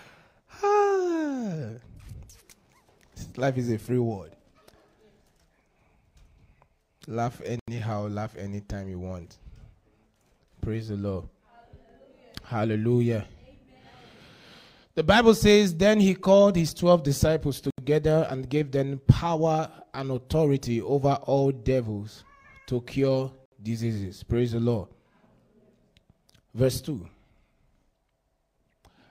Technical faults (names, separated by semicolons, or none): Bluetooth stall